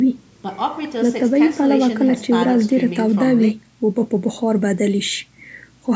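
From 2.89 s to the end at about 6 s, the treble boost of a 75 µs FM pre-emphasis curve was applied without the matching de-emphasis, so pre-emphasis is left on, rising to about 14 dB at 10 kHz relative to 1 kHz. Within the band that stops at 8 kHz, the speech turns thin, bright and sibilant.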